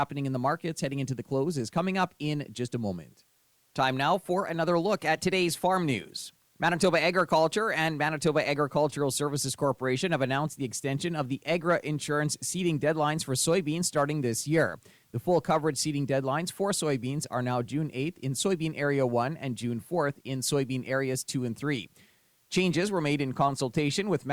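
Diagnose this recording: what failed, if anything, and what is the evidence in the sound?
The failure is at the sample-format conversion stage: low bit depth with dither. A steady, even hiss sits under the speech from start to finish. It does not follow the level of the talker, and there is no grainy distortion on quiet passages or word endings. The hiss lies very roughly 40 dB below the speech. That fits a signal cut to about 10 bits. Dither was added before rounding, so the quantisation error turned into constant white noise.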